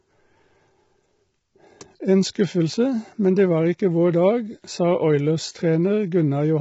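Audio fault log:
throughout, low-delay AAC compression: heavily rough, grainy speech, likely AAC-ELD at a low bitrate near 16 kbps; the spectrogram shows noise filling between harmonics and a hard ceiling at 7.8 kHz.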